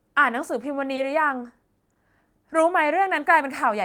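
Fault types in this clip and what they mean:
Short concealed packet loss: two brief gaps in the call audio, near 0.95 s and 1.93 s, each lasting about 40 ms, where roughly 20 ms of signal failed to arrive at the decoder in time. The receiver patched each hole by extending the preceding sound, continuing its pitch where voiced or substituting shaped noise where not, then crossfading back into the real stream. Each shows up as a short smear or wobble in the speech.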